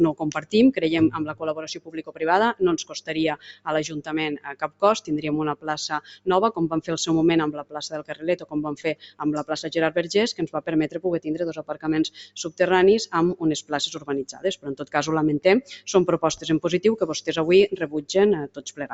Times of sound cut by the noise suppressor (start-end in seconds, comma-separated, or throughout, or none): 0.13-0.54, 1.29-6.27, 7.59-9.20, 10.40-11.00, 11.58-12.60, 13.62-14.94, 15.62-16.45, 17.84-18.94